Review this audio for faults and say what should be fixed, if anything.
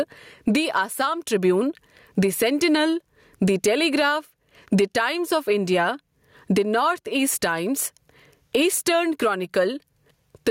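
Gain pumping runs through the whole speech clip. The gain swings by about 20 dB. Loud and quiet parts sit unnaturally close together. The likely cause is input gain set far too high, with a fast limiter clamping each peak. Lowering the input gain and easing the limiter's attack and release would prevent it.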